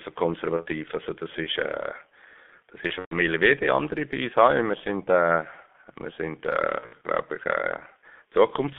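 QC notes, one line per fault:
Throughout: G.723.1 codec. The audio is band-limited to roughly 250 Hz to 3.5 kHz and coded at 6.3 kbit/s, so nothing above the telephone band survives. The codec works in 30 ms frames and its vocal-tract model adapts slowly. It cannot follow fast changes in the speech, which leaves the speech muffled and hoarse with smeared consonants. The coding damage is heavy across the whole clip.
0.56–0.66 s, 2.87–3.18 s, 6.80–7.08 s: VoIP packet loss concealed by the speech codec. About 30 ms, 150 ms and 120 ms of audio are missing, the last two scattered over 240 ms each. The decoder fills each gap by repeating its last pitch and filter at falling gain, which stretches the sound into a decaying buzz or coloured noise. The 120 ms unbroken run near 2.9–3.2 s gets muted after its second frame. Because each frame depends on the previous one, the speech stays distorted briefly after every gap.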